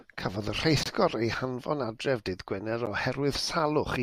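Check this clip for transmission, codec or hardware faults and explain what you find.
Two short dropouts in the speech, both a gap between stream segments. The first runs from 0.83 to 0.86 s, about 23 ms; the second is a brief hole at 2.86 s, about 12 ms. Two neighbouring segments' timestamps don't quite meet, so the player pads the difference with silence. You hear hard-edged blips of nothing, roughly 2 s apart, which fits 2-second segments. Nothing's actually missing; the timeline just stretches a little.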